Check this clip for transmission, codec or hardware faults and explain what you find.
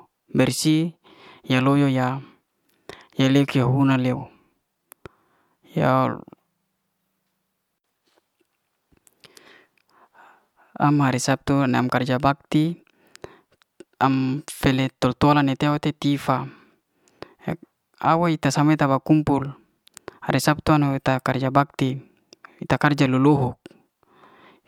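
Nothing wrong can be heard anywhere in this speech.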